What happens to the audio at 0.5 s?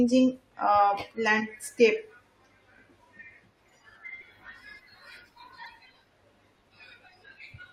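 Nothing goes wrong at 0.5 s; the speech plays through that moment intact, with no dropout, click or distortion.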